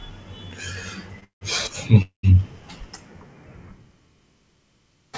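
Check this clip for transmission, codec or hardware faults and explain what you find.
Three transmission faults show up in this speech, all delay-related rather than loss-related, carried over a call path whose band stops at 8 kHz, which fits a G.722 codec.

At 1.20 to 1.24 s there is a short stall from a late packet. The sound is held slightly too long, with a slight buzz or dip. A packet missed its playout time, the jitter buffer ran dry, and the receiver stretched the last sound by about 21 ms, then resumed with nothing lost.

At 1.24 to 1.43 s and again at 2.02 to 2.25 s, a call audio freeze is heard. The sound turns into a fading buzz or hiss and drops to silence for roughly 130 ms and 120 ms, then picks up exactly where it stopped. The likely cause is packets held up in transit, which emptied the jitter buffer. The receiver filled about 171 ms and 212 ms respectively, so each freeze adds a gap without removing any audio.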